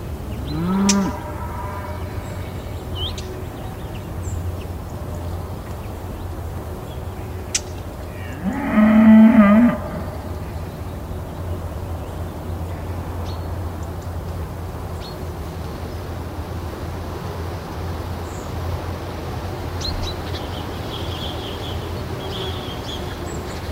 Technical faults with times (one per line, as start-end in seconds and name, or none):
15.49-19.49 adaptive stream at a lower bitrate